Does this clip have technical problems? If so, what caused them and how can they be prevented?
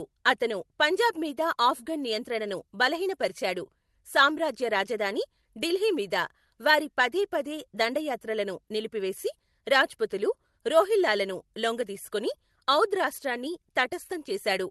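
Yes. All through the speech the pace feels faintly unsteady, with small skips at irregular moments. This is clock drift between sender and receiver. The sender's clock runs roughly 5 percent fast, so audio arrives quicker than it plays and the jitter buffer keeps overfilling. A receiver that estimates the drift and resamples smoothly to match it would prevent this.

From 0.04 s to 14.66 s, repeated timing corrections show up as tiny hiccups and a slightly hurried tempo, with playback running at 105 percent of natural speed. Each correction drops a short piece to keep the buffer from growing. The cuts all go the same way but are unevenly spaced. Spreading the adjustment over longer spans with gentle time-scale modification would make these corrections inaudible.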